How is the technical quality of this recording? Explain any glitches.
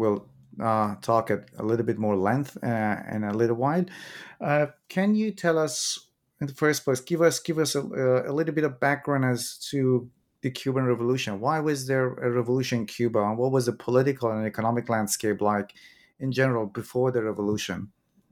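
No glitches or technical faults can be heard here.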